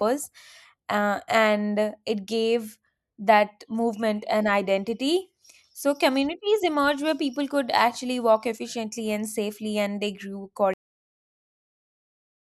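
At 10.74 s, just after "safely and they grew", the speech suffers a cut-off end: the final buffers were never written or played, so the audio stops mid-sound and falls straight to digital silence with no natural decay, remaining silent through the close.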